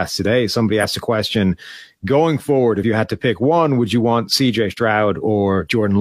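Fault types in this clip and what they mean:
Compressed frames skipped: at about 0.79 to 0.86 s, just before "a question going forward", the speech lurches ahead and roughly 50 ms of sound is gone. The jump points to about one whole frame of the compressed stream, of about 46 ms, that was missing or rejected by the decoder as damaged.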